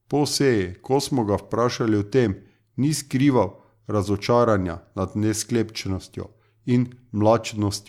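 No faults can be heard anywhere in the speech, with no dropouts, clicks, distortion or level jumps.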